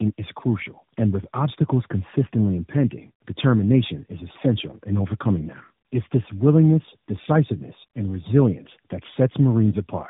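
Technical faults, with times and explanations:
Throughout, tandem speech coding: the speech has passed through three low-rate speech coders in a row, most likely AMR-NB at around 10 to 12 kbit/s, each re-encoding the previous coder's already degraded output, with mu-law telephone links in between. The errors stack, so the speech sounds rough, muffled and warbly. On a spectrogram nothing appears above 3.8 kHz, and the harmonics look smeared and blotchy. The waveform stays continuous.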